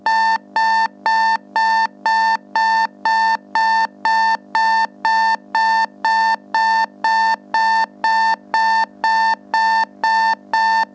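Gain pumping runs through the whole clip: the gain swings by roughly 10 dB, pulled down under each loud sound, squashing loud and soft parts together. The likely cause is an input gain set far too high, with a fast limiter or compressor pulling the level down on every peak. Nothing is heard above 8 kHz, which fits the G.722 codec at 64 kbps on the call path.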